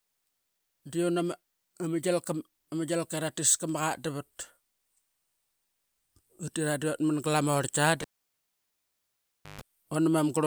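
At 8.02 s a pop marks a cable pulled and plugged in while live. The speech drops to near silence for about 1.55 s. A 0.14 s burst of 50 Hz mains buzz follows as the plug's tip touches first. Another pop restores the sound at 9.61 s.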